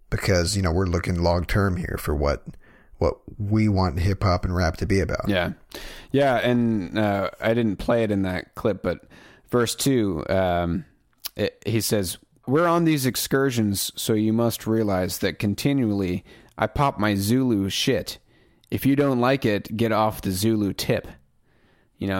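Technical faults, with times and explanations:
No technical faults are audible anywhere in the speech recording, and the signal stays continuous and intact throughout.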